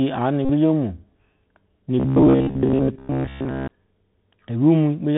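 The whole recording carries the Bluetooth CVSD headset codec. The speech is squeezed into a narrowband channel with nothing above 4 kHz. The one-bit delta modulator, running at 64 kbps, cannot follow fast, loud high-frequency movement, so sibilants come out scratchy and distorted. A fine granular hiss sits under the speech throughout, and the codec damage is plainly audible rather than subtle.

From 0.45 to 0.50 s there is a Bluetooth headset packet repeated run. Voice packets between headset and phone went missing, and the decoder replayed the last good packet's bits in their place. About 41 ms of audio was lost, which fits a run of roughly eleven 3.75 ms packets. The replay at that packet rate produces a short, steady buzz near 267 Hz until good packets resume.

From 2.00 to 3.68 s the speech turns into a rigid metallic drone. This is robotic sound from repeated short buffers. New audio arrived too slowly, and a roughly 15 ms chunk was looped to fill the gaps, most likely because of a playback buffer underrun. 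Most of that stretch is repetition rather than fresh signal. The loop imposes a fixed 66.7 Hz buzz that only loosely tracks the speech contour.

Inside that stretch, from 2.48 to 2.51 s, a second Bluetooth headset packet repeated event replaces about 19 ms, consistent with five lost packets. It adds another brief burst of the 267 Hz buzz on top of the robotic tone.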